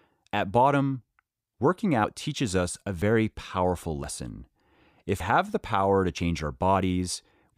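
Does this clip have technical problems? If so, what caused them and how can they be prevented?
Yes. The speech has five dropped buffers (overrun). Each one is a sudden jump forward, not a gap. They fall at 2.04 s, between "bottom working" and "teaches us a", then at 3.02 s, 4.04 s, 5.20 s just before "have the power to", and 6.18 s just after it. Each skip loses about 50 ms, except the one at 5.20 s, which loses about 150 ms. The likely cause is the recording program not collecting samples in time, so the hardware overwrote them. Larger buffers and a lighter system load during recording should prevent this.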